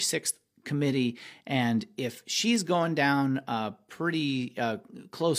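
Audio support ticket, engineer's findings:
Bit error spike at 2.56 s in speech. One sharp broadband tick, single sample, unrelated to surrounding signal. Probable component: memory or digital link, one flipped bit forcing a power-of-two jump and immediate return. Unlike a buffer dropout click, no gap or discontinuity follows.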